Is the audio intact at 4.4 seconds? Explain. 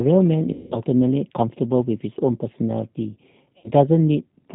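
No. At 4.4 s the sound carries G.729 codec damage, as it does from start to finish. The sound is rebuilt from a vocal tract filter, a pitch predictor and a few pulses per 5 ms subframe. That fits an 8 kbit/s rate. Nothing above 4 kHz survives, so the speech sounds dull and band-limited. The coarse pulse model makes it plainly rough and synthetic, with a buzzy, processed edge.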